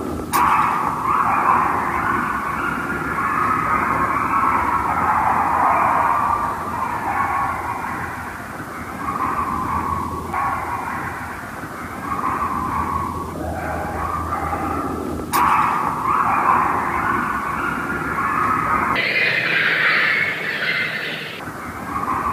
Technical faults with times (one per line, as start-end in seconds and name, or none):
18.96-21.40 section at the wrong speed